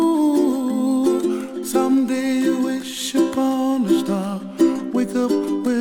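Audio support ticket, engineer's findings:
No faults found on listening.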